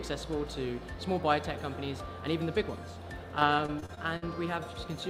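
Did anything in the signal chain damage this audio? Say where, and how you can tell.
Yes: choppy, robotic sound from 3.39 to 4.24 s, with seven dropouts up to 53 ms. This is repeated packet loss on the network, where concealment stretched the previous audio across each hole.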